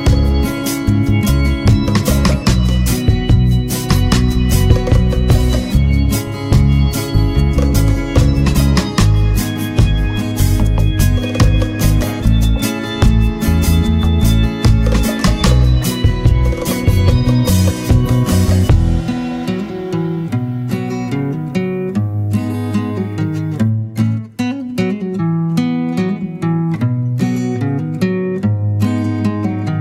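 Nothing technically wrong can be heard anywhere in this audio. No fault shows up at any point, so there are no times or causes to give.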